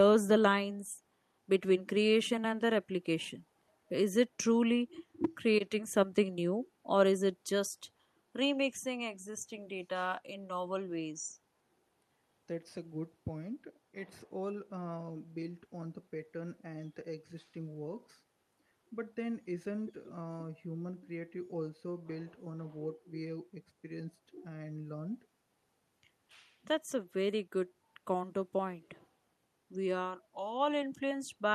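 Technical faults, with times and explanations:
Nothing in the speech recording stood out as a technical problem on listening.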